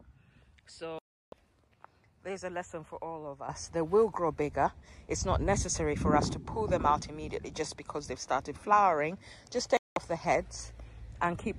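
At 0.99 s the sound cuts to silence for about a third of a second, returning at 1.33 s. This is a digital broadcast dropout: the receiver lost good frames and muted for 336 ms, which fits roughly 14 lost frames. Whatever was sent in that gap is gone. A second, shorter hole of this kind appears from 9.77 to 9.97 s, muting 192 ms.

At 3.49 s the sound and its background noise jump up together by about 9 dB, and they stay at that higher level to the end. This sudden gain jump is a step with no ramp between samples, likely from a gain setting or bit shift applied abruptly.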